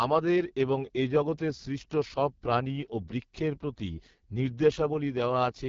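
Rough, raspy speech with nothing above 7.3 kHz runs throughout, from AMR wideband (HD Voice) coding at its harshest, which fits the lowest 6.6 kbit/s mode.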